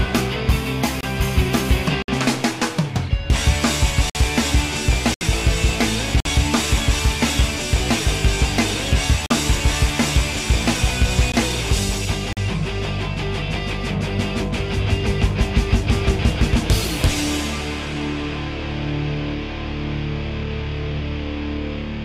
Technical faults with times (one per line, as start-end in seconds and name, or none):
1.01-1.03 gap between stream segments
2.02-2.08 gap between stream segments
4.10-4.15 gap between stream segments
5.14-5.21 gap between stream segments
6.20-6.25 gap between stream segments
9.26-9.30 gap between stream segments
11.32 gap between stream segments
12.33-12.37 gap between stream segments